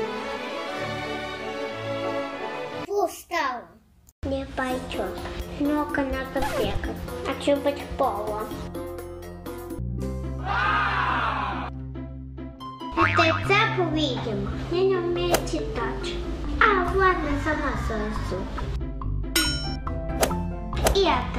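From about 15.19 s right through to the end at 21.39 s, a mains hum comes in: a steady low drone at 50 Hz with a few low harmonics riding on it. Power-line current is leaking into the signal path, through a ground loop or pickup from a nearby transformer. It's pretty prominent, sitting only around 10 dB under the audio, so you hear a constant buzzy floor sitting under everything in those last six seconds.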